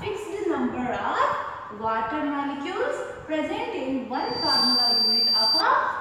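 From 4.13 to 5.65 s a loudspeaker feedback squeal appears: the microphone re-amplifies its own loudspeaker output, and loop gain above unity at 4.7 kHz makes that tone grow. It swells over under half a second to roughly 5 dB above the surrounding sound.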